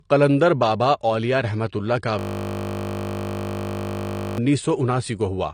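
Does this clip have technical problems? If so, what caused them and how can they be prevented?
Yes, two. Throughout, nothing comes through above about 9.8 kHz, and the speech carries a dull, smeared coding texture. That likely comes from a low-bitrate encode, something like 32 kbit/s AAC, that was then saved as a high-bitrate MP3. The bigger file can't bring back what was already thrown away. To prevent it, always encode from the original source rather than from an existing lossy copy.

From 2.19 to 4.38 s there's a system hang loop. The machine stalled while the audio hardware kept replaying its ring buffer, so one 20 ms slice repeats over a hundred times. At that 50 Hz repetition rate it comes out as a steady buzz. To prevent it, sort out the driver or system freeze, and give the audio thread priority so the buffer keeps getting refilled.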